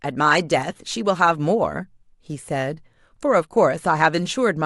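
No technical faults are audible.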